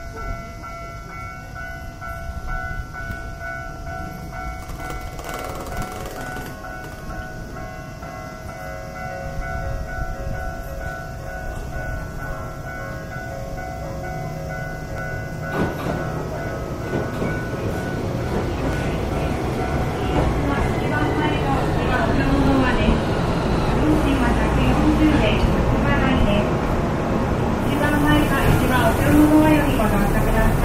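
From 3.76 to 29.94 s a click recurs every 3.74 s; that strict spacing, unlike random dropouts, marks likely clock drift buffer slips.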